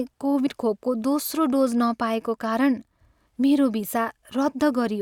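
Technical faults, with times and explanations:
0.46 s, compressed frames skipped: the speech jumps forward abruptly, losing roughly four frames' worth of audio, around 40 ms, in a single step. The jump fits a codec working in 10 ms frames, whose missing or rejected frames were simply not played.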